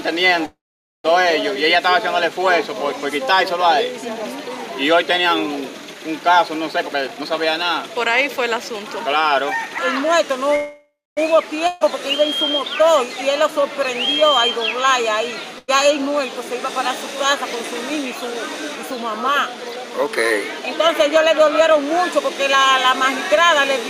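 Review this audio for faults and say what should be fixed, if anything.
Two call audio freezes stall the sound, at 0.45–1.06 s and 10.56–11.19 s. Each time the last sound is drawn out and fades, reaching silence for about 0.48 s in the first case and 0.26 s in the second. The audio then resumes exactly where it stopped, with nothing lost. The likely cause is packets held up in transit until the jitter buffer ran dry, which adds about 0.59 s and 0.61 s of delay. Unlike packet loss, no content disappears. This points to network delay spikes, and steadier routing or a somewhat deeper jitter buffer would prevent it.

Jitter buffer speed-up follows, as the receiver works off the built-up delay. From 6.72 to 10.38 s the audio runs at 116% speed, and from 17.16 to 22.31 s at 106%. Pitch stays the same while tiny pitch-period slices are trimmed repeatedly, roughly half a second in the first stretch and about 0.3 s in the second. 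The first stretch sounds noticeably hurried. Unlike a plain playback-rate error, pitch does not rise. Gentler, slower catch-up after delay spikes would avoid it.

Two bursts of packet loss cut content out. At 11.67–11.83 s about 140 ms is missing, covered by a held, fading continuation of the preceding sound. At 15.59–15.70 s about 100 ms is lost in the same way. Unlike the freezes, the audio comes back further along, so material is skipped rather than delayed. Forward error correction or packet redundancy on the link would cover losses of this length.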